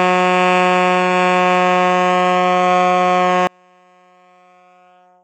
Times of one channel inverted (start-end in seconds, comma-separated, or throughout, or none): 3.47-5.23